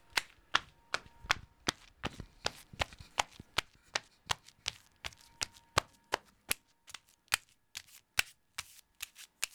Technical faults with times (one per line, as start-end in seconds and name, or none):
none